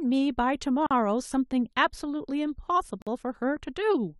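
Separately encoded pieces were joined without trimming encoder delay and padding, leaving gaps at a join of encoded pieces: silences of about 43 ms at 0.87 to 0.91 s and 48 ms at 3.02 to 3.07 s, with smeared edges, before the speech resumes where it stopped.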